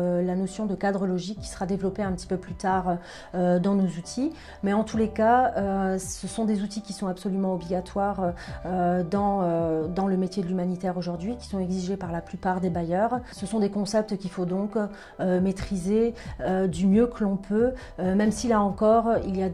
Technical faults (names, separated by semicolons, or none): none